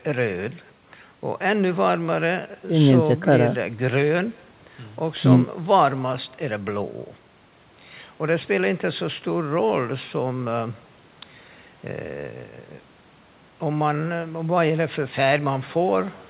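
Throughout the speech, every phrase is shadowed by a faint copy about a fifth of a second later, about 28 dB down. This is echo with no canceller: the far end's loudspeaker leaks into its microphone. Unlike reverb, it is a distinct delayed repeat rather than a smeared tail.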